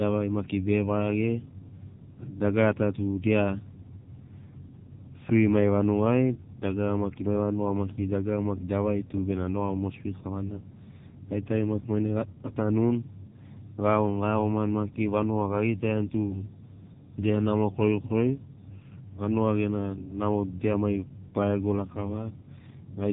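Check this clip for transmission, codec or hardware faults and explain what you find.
One codec fault runs through the whole clip. AMR narrowband mobile codec throughout: the speech is cut off above 3.8 kHz. Its thin, buzzy, synthetic sound fits a low 6.7 kbps mode, heavily coding each frame from a few pulses.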